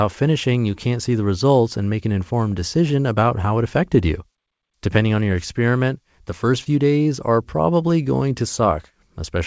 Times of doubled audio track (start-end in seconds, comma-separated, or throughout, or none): none